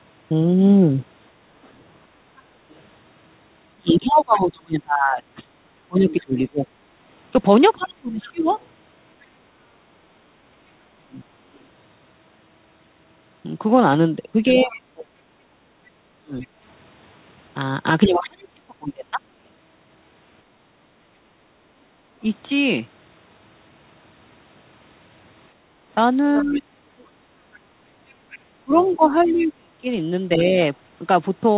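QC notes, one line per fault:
1.64–16.47 s and 26.53–29.45 s: other side's voice leaking through. A second, quieter voice sits beneath the talker, roughly 20 dB and then 25 dB down. This is likely loudspeaker playback that the echo canceller failed to remove.
2.18–2.35 s, 20.64–22.21 s and 25.55–25.85 s: background gated by the echo canceller. Room sound drops by about 6, 8 and 7 dB while the loudspeaker plays as the canceller clamps the microphone, then returns.
3.76–11.19 s, 14.5–22.23 s and 26.36–30.58 s: speech suppressed in double talk. The talker's level falls away in chunks, around 30–35 dB at worst, while the far side talks. This is likely the canceller turning both voices down together.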